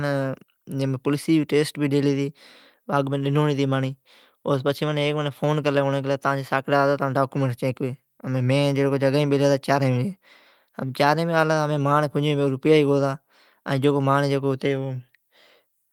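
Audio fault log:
Throughout: clock drift between sender and receiver. The sender's audio clock runs roughly 1% slow against the receiver's. Sound arrives a little more slowly than it is played out. The jitter buffer keeps draining as a result. The receiver must make up the shortfall by stretching what it has. This gives the whole clip a faint unsteadiness in timing. Small hiccups return again and again, at uneven spacing.
0.80 to 14.87 s: repeated timing corrections. The receiver keeps repeating short pieces to cover the slow sender. Every edit goes the same way, lengthening the sound. Across this span they add around 200 ms in total. The effective pace sits at 99% of normal. Each repeat is tiny and unevenly placed.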